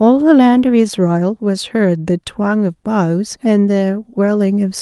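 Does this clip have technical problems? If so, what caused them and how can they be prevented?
No, this clip has no technical problems, so there is nothing to prevent.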